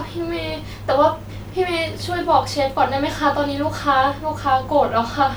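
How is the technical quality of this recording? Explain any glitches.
Nothing's amiss here: the speech comes across without any glitches worth pointing out.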